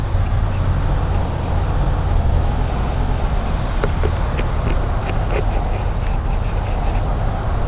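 The audio shows no technical faults; it has the narrow band of a telephone-style call path with nothing above 4 kHz, which fits G.711 A-law coding.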